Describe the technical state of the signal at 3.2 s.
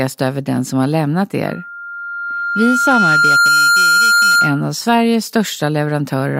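At 3.2 s a steady 1.4 kHz tone rides over the speech, swelling over roughly two seconds into a squeal that ends up a few decibels louder than the speech itself. This is loudspeaker feedback squeal, running from 1.46 s, just after "den som har lämnat", to 4.67 s. The microphone is picking up its own loudspeaker, and at 1.4 kHz the loop gain exceeds one, so that frequency keeps reinforcing itself until the loop is broken.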